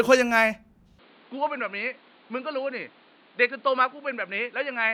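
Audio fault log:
0.99 s to 4.94 s, input switched to a poorer device: with no gap, the speech drops about 10 dB, loses everything above 4.8 kHz and turns dull and boxy, over a new noise floor roughly 30 dB down. The recording likely moved to a narrower-band microphone.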